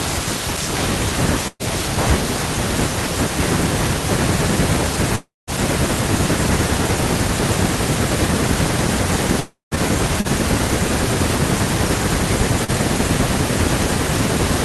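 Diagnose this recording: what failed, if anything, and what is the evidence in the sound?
The network path failed here, with a burst of packet loss at 1.47 to 1.62 s. About 120 ms of speech never arrived in time. The receiver extended the last sound and faded it down, so a held buzz or fading hiss stands where the speech should be. The final 30 ms or so goes quiet. The speech then resumes further along, and the missing stretch is simply gone.

Two longer gaps sit at 5.15 to 5.50 s and 9.40 to 9.74 s. Each has an extended buzz or hiss that fades away, then a clear stretch of silence of about 180 ms in the first and about 150 ms in the second. Around 320 ms of speech is lost each time. The speech comes back later without it. This is likely a long network dropout, with the concealment running out and leaving silence.

Short concealed packet loss occurs at 10.21 to 10.27 s and 12.64 to 12.71 s. 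Each time roughly 40 ms failed to reach the decoder. The receiver filled the hole from the preceding sound and blended back into the real signal. The result is a brief smear or wobble rather than a clear break. These are also network losses, just small enough for concealment to cover.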